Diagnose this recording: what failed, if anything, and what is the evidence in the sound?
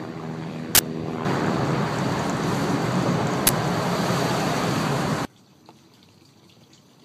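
Uninitialised buffer, driver or buffer stage. Loud digital-noise bursts at 0.75–0.79 s and 3.47–3.49 s. Blocks played before being filled, so leftover memory sounded.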